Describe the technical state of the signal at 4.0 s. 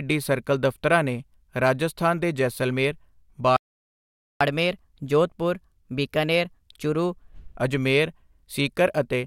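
At 4.0 s the speech is in the middle of a playback stall: the output just goes dead from about 3.56 s to 4.41 s, a gap of roughly 0.84 s where the sound stops abruptly in mid-flow and then picks back up. The likely cause is the player running dry of buffered data, or its audio thread getting blocked, so nothing reaches the output until it catches up again.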